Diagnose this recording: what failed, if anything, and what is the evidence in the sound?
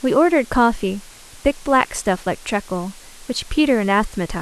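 The sample-format conversion went wrong here: the speech was squeezed down to about 7 bits with dither, a low bit depth with dither. That leaves a steady, even hiss under the whole clip, sitting roughly 25 dB below the voice. The dither turns the rounding error into plain white noise, so you hear no gritty distortion.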